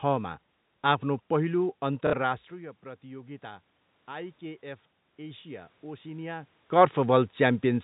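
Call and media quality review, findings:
Packet loss with last packet repeated, 2.07–2.13 s: brief robotic stutter. Receiver jitter buffer replays the last packet across about 60 ms, which fits two lost 30 ms packets.

Automatic gain rising, 2.57–7.01 s: sound and background swell gradually by about 7 dB. The AGC is compensating for input that dropped about 15 dB as the talker moved away.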